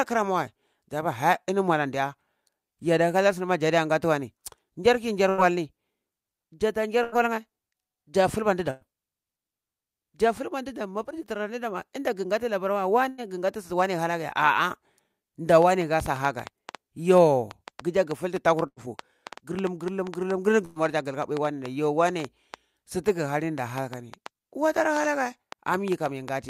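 Repeated packet loss (robotic sound) runs from 5.29 to 8.84 s in this speech recording: three separate gaps, the longest 105 ms, remove about 180 ms of audio. Each is patched by stretching the preceding sound, giving a choppy, mechanical texture with fragments missing.

Jitter buffer speed-up occurs at 10.26 to 10.68 s, just before "danu mapar dzi", and again at 13.56 to 13.99 s, running at 108% and 109%. Then, from 18.86 to 21.48 s, a gentler 103% trims about a tenth of a second. The receiver is draining excess buffered delay by cutting out short pitch-period slices, so the speech sounds hurried while its pitch stays put.

A burst of packet loss hits at 13.09 to 13.30 s, 18.67 to 18.79 s and 20.65 to 20.79 s, each dropping about 60 ms. The last sound is extended and faded across each hole, and the speech resumes with that piece gone.

A train of clicks starts at 15.62 s and continues to the end, about 4.7 irregularly spaced ticks per second, peaking roughly 10 dB above the speech and audible in pauses as well. 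This is likely caused by electrical interference or a faulty connection or power supply.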